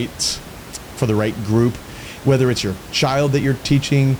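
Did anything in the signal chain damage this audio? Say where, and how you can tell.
No, nothing in the chain has damaged this speech; the only thing underneath it is the room's own background noise, sitting about 18 dB below the talking, and that belongs to the space the microphone was in rather than to any stage of the system.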